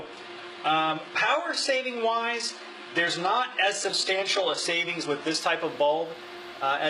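From the start until 5.4 s the treble stops near 11.1 kHz and sounds thin and smeared, with stronger codec artefacts, which fits an adaptive stream starting at a low bitrate, something like 12 kbit/s HE-AAC. At 5.4 s it jumps cleanly to fuller quality, nearer 96 kbit/s AAC.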